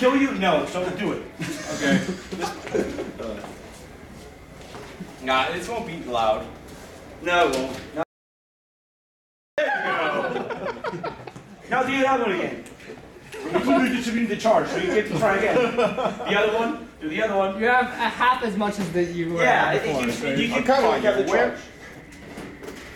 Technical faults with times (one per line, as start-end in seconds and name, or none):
8.03-9.58 audio dropout to silence